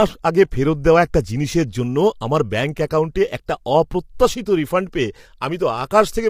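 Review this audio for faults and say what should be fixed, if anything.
Low-delay AAC compression damage runs through the whole clip and is plainly audible. The speech sounds rough and grainy, with noise filling the gaps between pitch harmonics and a thin, synthetic-sounding top band. This is likely AAC-ELD coding at a bitrate around 32 kbps. Its short frames cannot separate the harmonics cleanly, so the texture stays granular rather than developing the warbling, swirly tails of longer-frame codecs. To prevent it, send the call at a higher bitrate or use a full-delay codec where latency allows.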